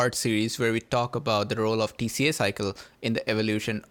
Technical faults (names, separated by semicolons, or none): none